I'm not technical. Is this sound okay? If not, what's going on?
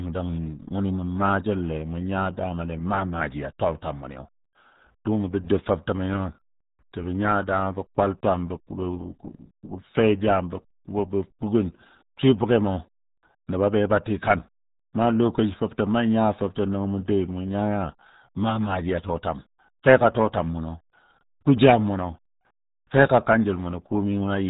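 No. The whole way through, the speech sounds muffled and gargly, with nothing above 3.8 kHz. That's the RealAudio 14.4 codec, an old dial-up format, heavily squeezing it.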